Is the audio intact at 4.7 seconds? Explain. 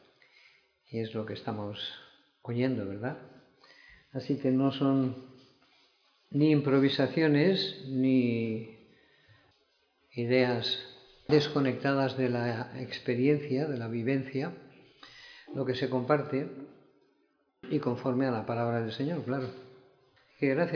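Yes, the audio is intact at 4.7 seconds, with no dropout, click, distortion or other fault at that point.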